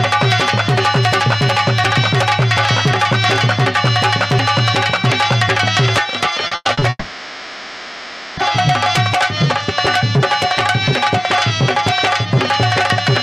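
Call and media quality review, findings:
Repeated packet loss (robotic sound), 6.47 to 6.83 s. Choppy texture over a short stretch. Four separate holes, the longest 100 ms. Jitter buffer and concealment in the receiving path. Each lost packet is patched by extending the preceding sound, and the next loss arrives before the audio settles. Over half of this 0.36 s span is concealed, so the sound turns robotic and loses pieces.

Long network dropout, 6.89 to 8.39 s. Sound held and smeared into a fading buzz for about 1.5 s, followed by a brief silence near the end. Audio resumes at 8.39 s with the intervening material gone. Network transport, with receiver concealment covering the gap. This is likely a sustained interruption in packet arrival. Concealment stretches the last sound across the hole until it decays.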